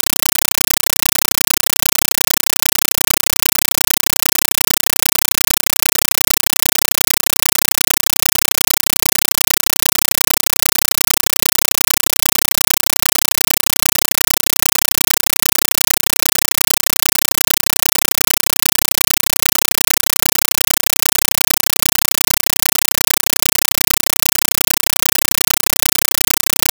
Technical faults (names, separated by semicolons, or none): compressed stream played as audio